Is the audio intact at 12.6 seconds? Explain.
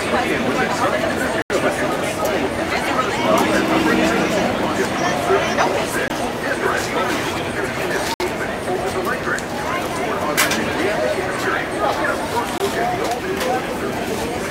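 No. A block of digital silence runs from 12.58 to 12.60 seconds, ending right at the moment asked about. For 20 ms, the audio is replaced by silence. This is the kind of hole left when output samples are not delivered in time, or are replaced after a bad calculation. The sound drops straight to nothing and returns with no fade, so the gap is heard as a short hole.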